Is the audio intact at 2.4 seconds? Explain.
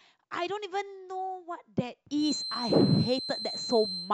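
No. At 2.4 seconds a feedback whistle is sounding, running from 2.14 s to the end of the speech. It is a thin, steady tone near 4.1 kHz, roughly 10 dB below the speech, swelling and fading slowly in level. Its likely cause is a loudspeaker-to-microphone loop held just at the edge of feedback.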